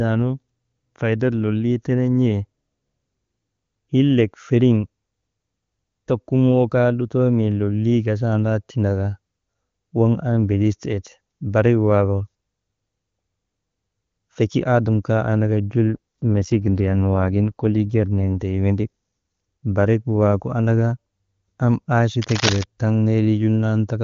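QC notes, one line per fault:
15.95 to 18.40 s, AMR rate drop: for about two and a half seconds the speech goes rougher and more synthetic. The bandwidth holds and nothing drops out. That's the codec being pushed down to a lower mode, which sounds like a step from the clean 23.85 kbit/s AMR-WB mode heard elsewhere to around 8.85 kbit/s, with the freed bits going to error protection on a weak link. Quality snaps back once the rate recovers.
22.22 to 22.64 s, cable scratch noise: a burst of dense, uneven scratching and rustling lasting roughly 0.4 s, about as loud as the speech itself. It's likely a worn cable, connector or control being moved, with the contact resistance jumping around quickly and throwing those ragged noise bursts straight into the signal.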